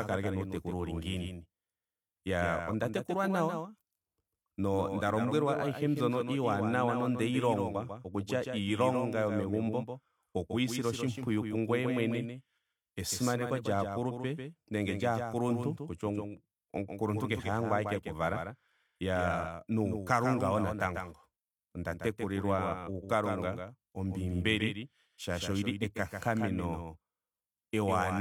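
From start to finish the speech carries a doubled audio track: a second, full-band copy trails the original by about 150 ms and sits about 5 dB quieter, likely from a slower capture path. It sounds like a dry slapback with no room decay. On a waveform or spectrogram, every syllable onset repeats as a fainter duplicate a fixed distance later.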